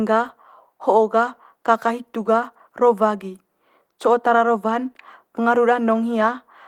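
No technical faults can be heard anywhere in this speech recording. The Opus voice compression runs in its hybrid mode at what sounds like about 20 kbps, keeping the full band with content reaching up to about 20.2 kHz and leaving only light coding traces on the sound.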